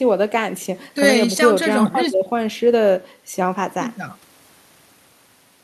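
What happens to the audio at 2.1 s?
Nothing goes wrong at 2.1 s; the speech carries on intact through that moment with no dropout, click or distortion.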